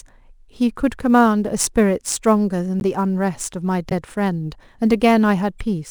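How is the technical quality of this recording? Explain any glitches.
The recording has two kinds of technical fault: a constant clock-jitter roughness, plus three brief decoding glitches.

Sample clock jitter runs throughout. Timing wobble of a few microseconds turns waveform slopes into a hiss roughly 30 dB down, rising with loud speech. On a spectrogram it appears as diffuse high-frequency haze that vanishes in pauses.

Corrupt frame decoded at 2.80 to 2.82 s, 3.90 to 3.92 s, and 5.59 s. Damaged compressed frames were decoded anyway, misplacing energy and producing short chirps or blips, visible as sharp, out-of-place spectral bursts.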